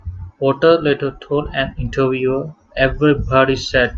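No technical faults can be heard anywhere in the speech recording; the signal stays steady and continuous throughout.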